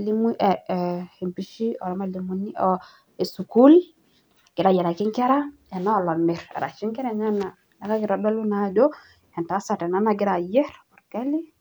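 No technical faults can be heard anywhere in the recording. Across the whole of the speech, nothing stands out as a problem in the audio path.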